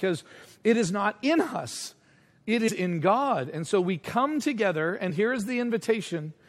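At 2.67 s, just after "not in us it", compressed frames are skipped. The audio leaps ahead about a tenth of a second, which fits four 23.2 ms frames. At 5.09–5.11 s, after "so we come together", about two frames go.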